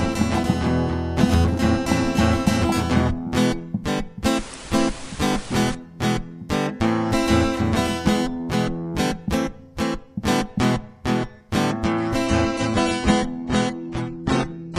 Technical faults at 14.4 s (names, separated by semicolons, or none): adaptive stream at a lower bitrate